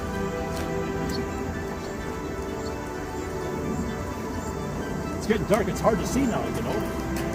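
From 1.84 to 2.14 s there is DAB burbling. Bit errors, around half a percent, pass the error correction into the MP2 data. Corrupted samples put short noise blips into single sub-bands, and corrupted scale factors make sub-bands jump in level for up to a frame, heard as burbling.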